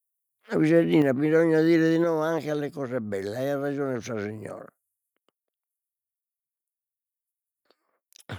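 Speech, with two sudden drops in level at 1.02 s and 2.04 s. Each time, voice and background fall together by about 5 dB in one step. This is a microphone volume stepped down. The call software likely lowered the input gain after finding it too hot.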